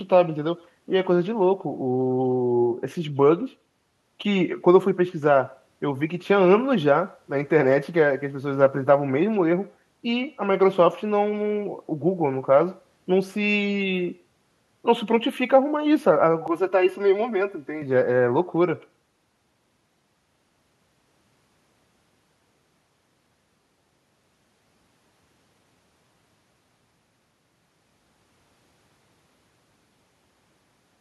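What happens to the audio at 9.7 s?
At 9.7 s the speech carries an echo with no canceller, present throughout: the far end's loudspeaker feeds its microphone, so a faint, thin copy trails about a tenth of a second behind, roughly 28 dB down.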